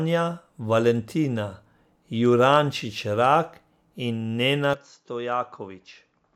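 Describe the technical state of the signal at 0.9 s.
At 0.9 s the speech signal is intact, with no dropout, distortion, clipping or other fault audible at that moment.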